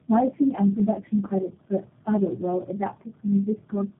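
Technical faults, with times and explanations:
Throughout: tandem speech coding. The speech has gone through several low-rate speech coders back to back, likely four, each re-encoding the last one's damage. That stacking gives the rough, muffled, warbly quality, and nothing comes through above 3.8 kHz.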